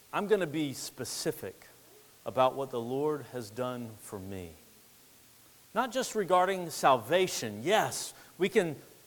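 From start to end, low bit depth with dither adds a steady, even hiss about 30 dB below the speech, without distortion, consistent with 8-bit quantisation.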